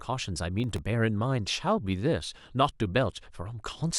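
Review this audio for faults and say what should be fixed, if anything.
Processor overload crackle appears from 0.60 to 0.78 s. The processor could not finish its audio buffers on time, and it missed several deadlines in quick succession. Each buffer is very short, well under a millisecond, and every miss was filled with silence. The speech is therefore chopped by a handful of tiny hard-edged gaps, heard as a brief gritty crackle over the voice that stops once the load eases. To prevent it, use a larger buffer or cut competing processing load so every buffer is finished before its deadline.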